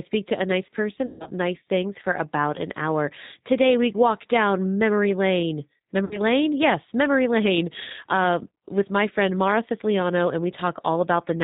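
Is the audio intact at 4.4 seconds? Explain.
No, at 4.4 s the speech carries G.729 codec damage, as it does throughout: rebuilt from a filter and sparse pulses, nothing above 4 kHz, audibly rough and synthetic.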